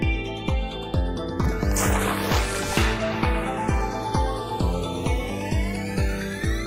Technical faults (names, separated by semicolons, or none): channels drifting apart